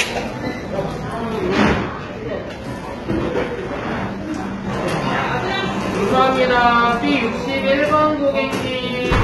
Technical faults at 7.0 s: HE-AAC compression

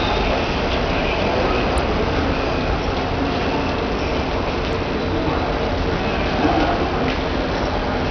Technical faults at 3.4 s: Bluetooth SBC compression

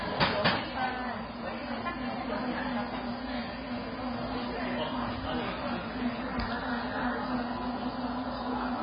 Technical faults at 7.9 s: AAC compression

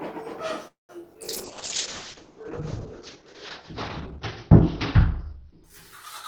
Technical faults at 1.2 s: short concealed packet loss; call bitrate drop

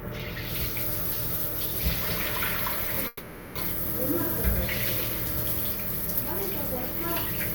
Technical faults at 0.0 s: none

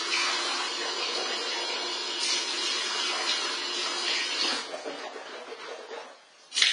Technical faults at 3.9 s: AAC compression

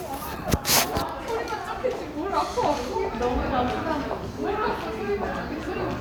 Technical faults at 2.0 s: none

